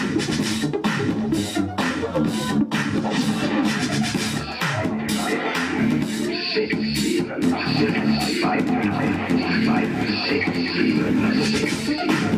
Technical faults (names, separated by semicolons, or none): doubled audio track